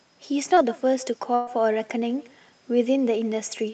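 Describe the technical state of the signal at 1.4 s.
At 1.4 s the signal sits inside a burst of packet loss, running from 1.35 to 1.49 s. About 120 ms of audio never arrived. The receiver stretched the last sound across the gap, fading it, so a held buzz or hiss replaces the missing part before the audio jumps ahead.

Echo with no canceller also runs through this moment. The far end's loudspeaker feeds its microphone, and nothing removes it. The speech returns roughly 150 ms later, about 20 dB quieter, as a thin shadow trailing each sound.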